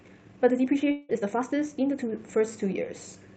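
From the start to 2.10 s the speech runs at about 1.42 times normal pace with its pitch unchanged, sounding rushed. This is likely a time-stretched section, where short pieces were dropped to shorten it. On a spectrogram, harmonics stay level while syllables look compressed, with small seams between them.

From 0.91 to 1.11 s, a long network dropout likely caused about 180 ms of speech to vanish. For about 175 ms the last sound continues as a fading buzz, with no true silence, before the speech resumes further on. The waveform shows a smooth decaying envelope, and the spectrogram shows smeared, repeating bands instead of changing formants.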